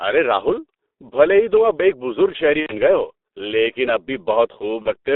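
From start to finish the speech carries G.723.1 codec damage, and it is heavy. The audible band runs only from about 250 Hz to 3.7 kHz, so the sound is muffled and thin at both ends. The codec's slow-updating voice model, at a rate consistent with about 6.3 kbit/s, smears fast transitions: consonants blur together and voiced sounds take on a rough, hoarse texture.

At 2.60 s a stretch of VoIP packet loss concealed by the speech codec begins, running to 2.73 s. The lost span of about 90 ms fits three consecutive 30 ms frames. The decoder fills the gap by repeating its last pitch and spectral shape at falling gain, so the sound is stretched out and fades, going silent on the third lost frame, and the voice stays weak for a moment after the gap. A second, shorter loss at 4.82 to 4.89 s fits a single 30 ms frame and produces a brief smear of stretched sound, with the sound staying weakened for a moment after the gap.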